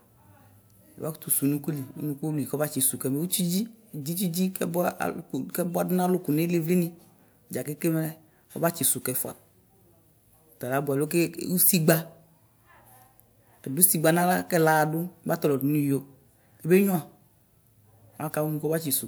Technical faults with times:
none

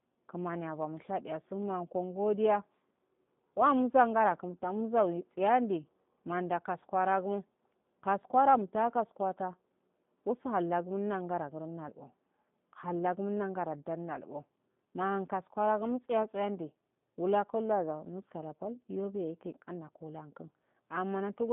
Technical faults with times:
0.00-21.52 G.729 codec

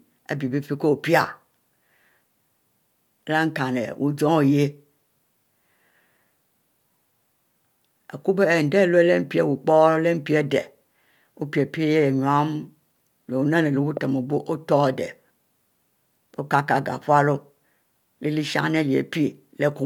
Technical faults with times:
13.97-13.99 loud pop

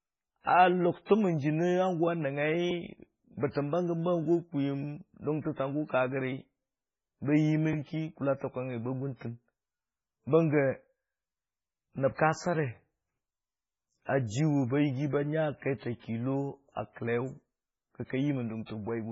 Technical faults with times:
0.00-19.11 MP3 compression
1.05-1.09 pre-echo

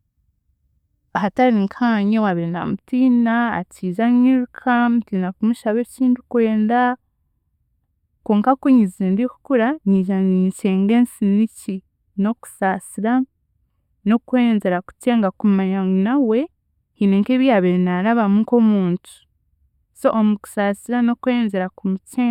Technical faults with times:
2.30-22.30 channel delay (comb filtering)

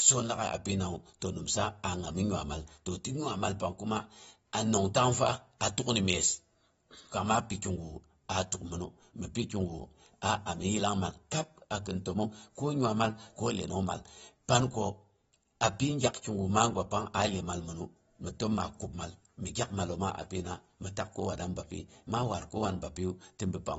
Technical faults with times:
0.00-23.79 AAC compression

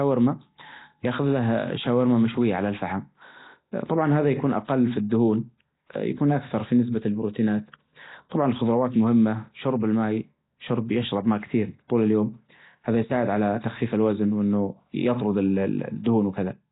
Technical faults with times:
0.00-16.71 Nellymoser compression

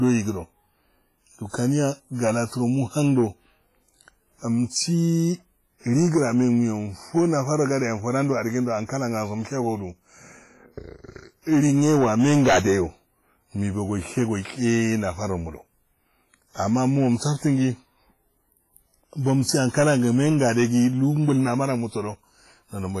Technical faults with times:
0.00-23.00 hard clipping
0.00-23.00 WMA compression

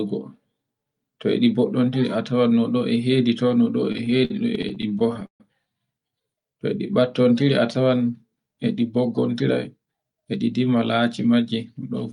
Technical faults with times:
3.92-5.41 repeated stalls (stutter)
8.96-10.51 jitter buffer speed-up

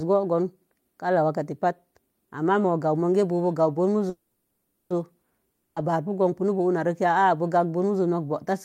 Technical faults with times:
4.09-4.92 call audio freeze
5.50-5.78 long network dropout

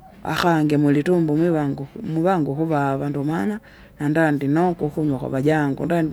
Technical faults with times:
none

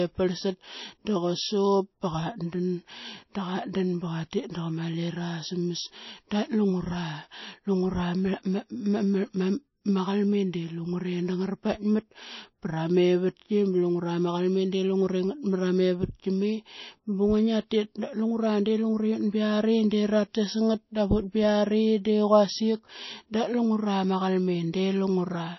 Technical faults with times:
0.00-25.58 low-bitrate audio saved at a high bitrate

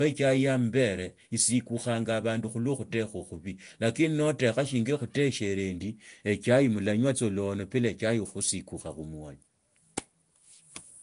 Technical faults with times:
0.00-11.03 Nellymoser compression

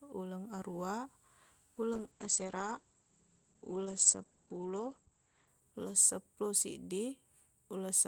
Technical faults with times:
1.95-7.09 call bitrate drop

